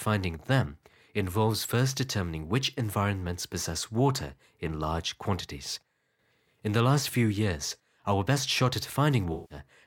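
Speech, with one damaged stretch near the end: just after "our best shot at", from 9.33 to 9.59 s, the sound turns smeared and hazy, a noisy, phasey wash instead of clear detail. This is AAC frame loss with concealment. About 171 ms of coded audio went missing, which fits a run of eight frames, and the decoder covered the gap by reusing the last good spectrum with altered phase and energy, leaving that blurred texture.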